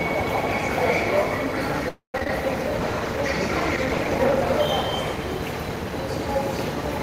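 From 1.88 to 2.15 s the sound stalls: the last moment is stretched into a fading buzz that drops to silence for about 130 ms, then the audio resumes where it left off, with nothing missing but everything after it pushed back by about a quarter of a second. This call audio freeze is likely from packets held up in transit, which let the jitter buffer run empty.

Between 2.18 and 2.29 s the audio turns choppy, with four brief holes of up to 20 ms each. This is repeated packet loss. Each dropout is patched by extending the previous sound, and the next one follows almost immediately. About 40 ms of audio is lost outright.

From 2.76 to 6.00 s the texture coarsens and takes on a rough, watery quality. This is a call bitrate drop. The encoder was pushed from 32 down to 17 kbps and held at the lowest rate for about 1.2 s, coding the sound with far less detail until the rate climbed back.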